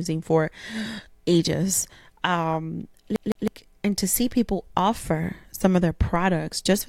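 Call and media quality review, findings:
CD stuck on one turn, 3.16 to 3.48 s: speech stutters, the same 158 ms segment repeated twice with brief mutes at each jump. Disc playback mechanism, laser thrown back one track by a scratch. Exact, evenly spaced repeats distinguish it from packet-loss concealment.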